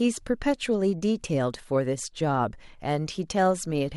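There are no technical faults in this speech to describe, at any point in time.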